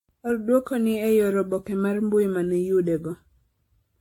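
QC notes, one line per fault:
throughout, generation loss: speech swirly, hollow and smeared, attacks blurred, nothing above 18.6 kHz, worse than one 96 kbit/s AAC pass; likely about ten re-encodes.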